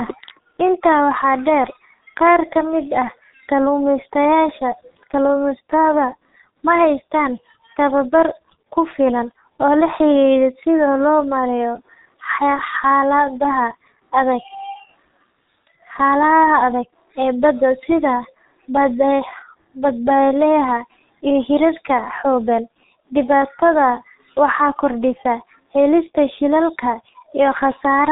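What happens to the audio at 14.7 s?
The G.723.1 codec damage present across the whole speech clip is heard at 14.7 s as well. Nothing passes above 3.8 kHz, so the speech is muffled, and the heavy damage makes it hoarse with smeared consonants. The codec encodes in 30 ms frames and updates its vocal-tract model only slowly, so rapid articulation blurs. The dullness and roughness point to a very low bitrate, around 6.3 kbit/s.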